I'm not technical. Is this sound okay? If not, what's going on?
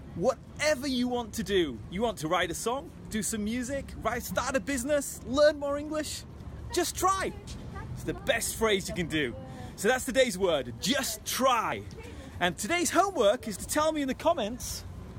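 No. At 1.1, 8.18, 11.72 and 14.6 s the sound jumps ahead without any gap. The likely cause is a dropped buffer (overrun): the software fell behind, losing about 20 ms each time (40 ms at 11.72 s) before the ends were joined.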